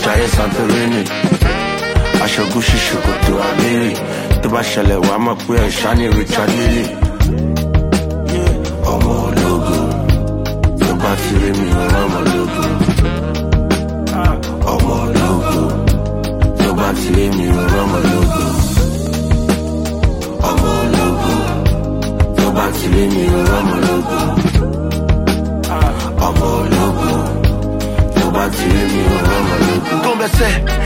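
Around 13.57 to 14.28 s there's a quick run of six CD scratch ticks, and again from 18.78 to 19.35 s a run of five, both ticking along at roughly eight a second. Each one is a tiny click or dropout of a couple of milliseconds at most. It's a scratch on the disc: every rotation the damage beats the error correction, so the player patches or mutes those few samples.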